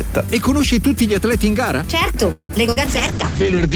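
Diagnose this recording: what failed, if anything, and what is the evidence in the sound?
Call audio freeze, at the network and jitter-buffer stage: packets were likely held up in transit and the receive buffer ran dry from 2.31 to 2.51 s. The receiver kept extending the last sound as a fading buzz, ending in roughly 60 ms of silence before fresh audio resumed. Playback picks up where it stopped, so nothing is lost. The sound is simply pushed later by about 0.18 s, leaving an inserted hold and gap.

Short concealed packet loss, also at the network stage with decoder concealment: two holes follow closely, at 2.67 to 2.70 s and 2.72 to 2.78 s. Each lost about 40 ms of real audio. In the first, the receiver appears to jump ahead to recover the delay built up by the freeze, filling only a few milliseconds. In the second, it synthesised about 40 ms by continuing the preceding sound. Both are heard as a quick smear or wobble, with brief material dropped.

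Call bitrate drop, at the codec stage driven by congestion control: from 2.88 s to the end, the encoder was pushed from a rate that sounds like full-band quality, around 48 kbps, down to something that fits roughly 8 kbps. The audio bandwidth collapses from 20 kHz to 8 kHz, so the top end goes dull and muffled. The coarser coding adds a rough, watery texture that stays for the last 0.9 s.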